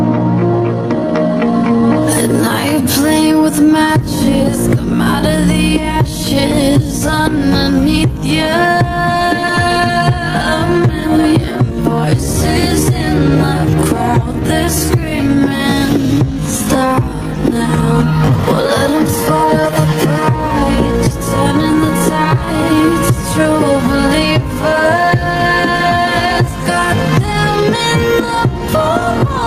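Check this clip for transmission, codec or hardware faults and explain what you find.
One fault runs through the whole clip: gain pumping. The level swing is large, around 15 dB. Loud and quiet passages sit unnaturally close together, and everything sounds squashed. The likely cause is input gain set far too high for the microphone, with a fast limiter or compressor clamping down on each peak and releasing in the pauses.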